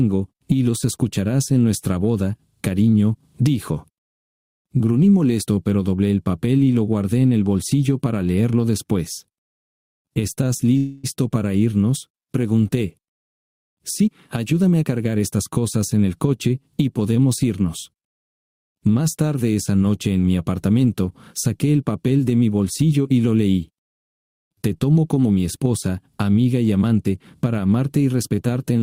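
At 10.77 s the sound hangs for a moment. What was last playing gets stretched out as a buzzy, fading tail until 11.06 s, about 0.26 s of filler. Then the audio carries on exactly where it left off, so nothing is lost, just pushed back by that quarter-second. That's a classic call audio freeze. The likely cause is packets stalling in transit and the jitter buffer running dry, with the receiver improvising to cover the wait.

A couple of seconds later, from 13.73 s to 15.40 s, you get the payback: a jitter buffer speed-up. With that extra delay now sitting in the buffer, the receiver trims it by snipping out tiny pitch-period-sized chunks over and over. Playback runs at about 116% speed while the pitch stays put. All in, it claws back roughly a third of a second, and the passage comes across as a bit rushed.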